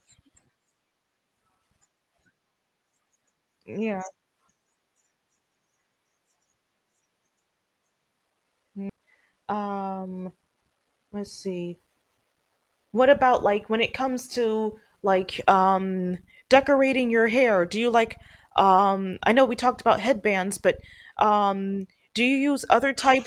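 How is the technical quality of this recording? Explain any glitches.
The recording has two connected glitches a little under 9 seconds in, riding on a call-codec path that sounds like Opus, with the top end rolled off around 12 kHz.

First, a skip ahead at about 8.89 to 8.91 s. Playback jumps forward with no gap, dropping roughly 0.7 s of speech. Audio was dropped while later audio was already queued, likely by the buffer when it overflowed, and the two sides were butted together, so it sounds like an abrupt splice.

Right after, from 8.99 to 10.85 s, there's a jitter buffer speed-up. The receiver snipped short pitch-period pieces over and over, about a fifth of a second in total, to shrink the backlog. Speech runs at 110% speed at the same pitch and sounds hurried.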